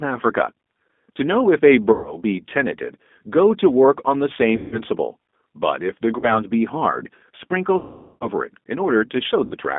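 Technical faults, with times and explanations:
Throughout: G.729 codec. The audio is confined to roughly 200 Hz to 3.6 kHz and has a slightly rough, synthetic grain, consistent with an 8 kbit/s model-based coder. Unlike plain band-limiting, the timbre itself is rebuilt rather than just dulled.
1.92–2.18 s, 4.56–4.82 s, 6.19–6.41 s, 7.79–8.28 s and 9.45–9.55 s: VoIP packet loss concealed by the speech codec. Gaps of 120, 160, 40, 420 and 60 ms are bridged by a fading tone or noise extrapolated from the preceding sound, with lingering weakness afterward.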